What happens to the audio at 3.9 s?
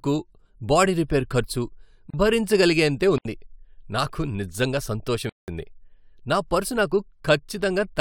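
Nothing goes wrong at 3.9 s; the speech plays through that moment intact, with no dropout, click or other fault.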